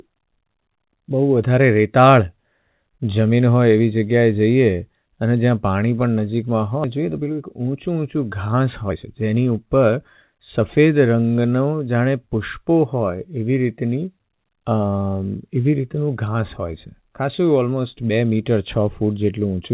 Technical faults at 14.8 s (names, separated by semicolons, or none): none